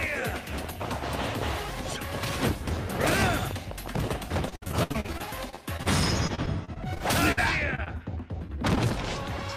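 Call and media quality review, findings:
Repeated packet loss (robotic sound) at 4.49–5.87 s, 6.27–7.39 s, 7.75–8.87 s. Choppy sound with pieces missing. Jitter buffer or network path. Lost packets patched by stretching prior audio, gaps up to 69 ms. Densest in the first stretch, easing through the third.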